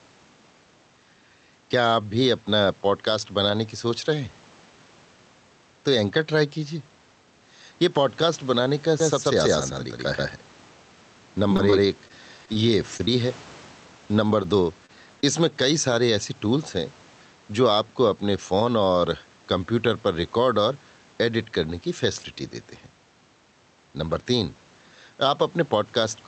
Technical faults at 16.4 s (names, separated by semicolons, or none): gain pumping